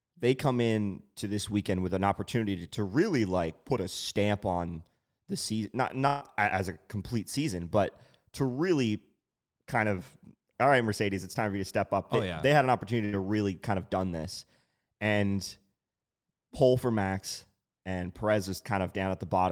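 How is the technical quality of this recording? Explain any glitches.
Two dropouts, both a burst of packet loss. At 6.07 to 6.23 s, after "on the season not", and at 13.05 to 13.15 s, after "yeah they had an", lost packets get covered by a stretched, fading copy of the last sound. Then roughly 140 ms and 80 ms of speech are skipped.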